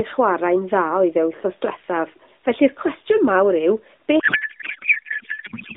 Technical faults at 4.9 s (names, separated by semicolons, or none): codec payload misread